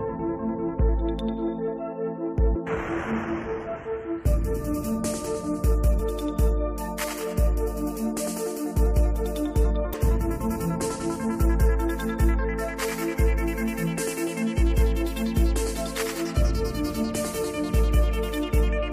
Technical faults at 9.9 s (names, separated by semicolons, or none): damaged data in a compressed stream